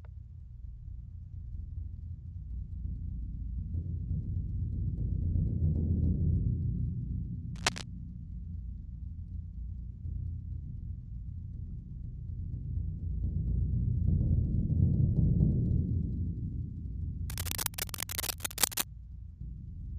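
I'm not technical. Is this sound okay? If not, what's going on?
No, not entirely. There's cable scratch noise in two spots: a short burst from about 7.55 to 7.83 seconds, and a longer one from about 17.30 to 18.85 seconds. Both times you hear a rough, crackly scratching laid over the sound, roughly as loud as the sound itself. The likely cause is a worn cable, plug or knob being moved, so the electrical contact flickers and spits out bursts of noise.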